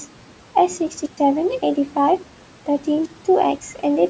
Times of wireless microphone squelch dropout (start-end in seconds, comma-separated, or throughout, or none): 1.03-1.19, 3.02-3.12